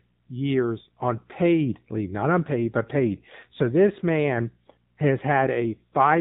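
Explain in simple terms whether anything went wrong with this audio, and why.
Something did go wrong. The speech has been squeezed through the AMR narrowband mobile codec, the phone-call codec, from start to finish. Everything above 4 kHz is cut away. The voice is rebuilt from a simple model, so it sounds muffled, buzzy and noticeably synthetic throughout.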